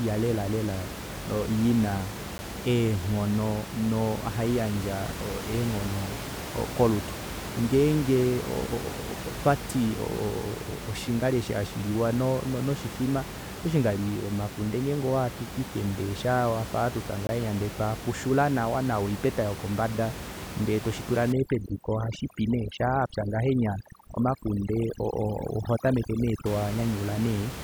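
At 2.38 s and again from 17.27 to 17.29 s there's a block of digital silence: the output briefly drops to zeros, probably a late-filled buffer, so you hear a sharp tick the first time and a short hole the second. Then from 21.32 to 26.46 s the overdone noise removal kicks in, gating out the room noise, which elsewhere sits about 10 dB under the speech, and leaving twinkly specks.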